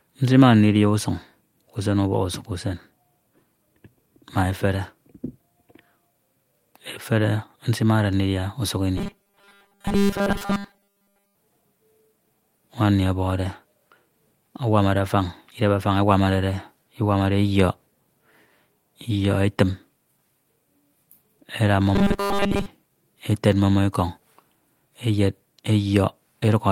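From 8.98 to 11.35 s the speech takes on robotic sound from repeated short buffers, then does it again more briefly from 21.95 to 22.66 s. It's a hard, metallic buzz at 200 Hz that still roughly tracks the talking. That pitch fits a 5 ms chunk being looped over and over, with most of the real audio in those stretches skipped. The likely cause is new audio arriving too slowly, so playback fills the gaps by repeating the last little buffer.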